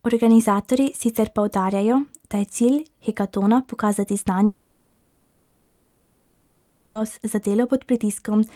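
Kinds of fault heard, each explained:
long network dropout: After "cilj hekatona pokazati" at 4.45 s, the speech stops for 2.5 seconds. A synthetic buzz or hiss continuing the last sound fills the whole gap to 6.97 s. Speech then resumes with that stretch missing. Lost packets are the likely cause.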